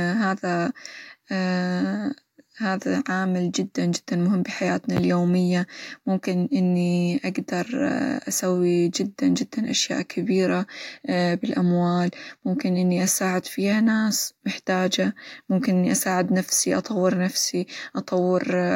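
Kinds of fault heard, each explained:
No technical fault is audible anywhere in the speech.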